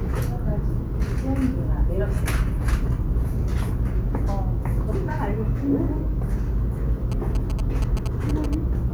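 From 7.12 to 8.55 s, a nearby phone's rectified GSM signalling bursts add galloping 217 Hz buzzes about 15 dB below the signal, appearing as clustered vertical spectrogram stripes.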